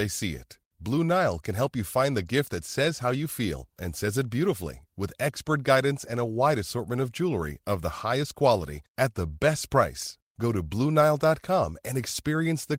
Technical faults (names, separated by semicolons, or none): none